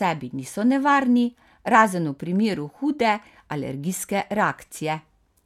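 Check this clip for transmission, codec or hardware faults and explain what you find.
No transmission, codec or hardware faults found in this speech.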